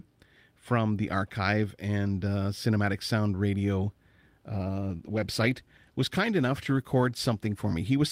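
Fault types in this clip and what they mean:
call bitrate drop: from 4.53 to 7.79 s the speech turns rough and watery, fitting a fall from 64 to 19 kbps; spectrogram detail smears and thins.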